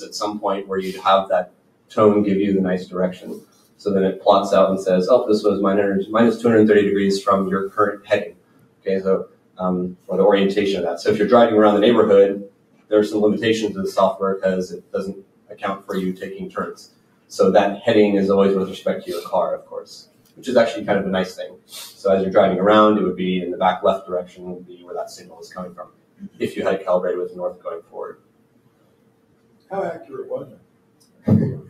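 A speech-tuned noise suppressor applied to music or sounds runs throughout, swinging gain by about 20 dB. Unlike a plain gate, attacks pass while held tones and tails pump and thin. Sound cut by the noise suppressor dips up to about 17 dB at 0.0–1.95, 3.15–3.85, 7.69–10.1, 12.46–12.92, 14.7–17.32, 19.59–20.48, 21.47–22.05 and 24.01 to the end, where sustained passages sink rather than dropping out abruptly.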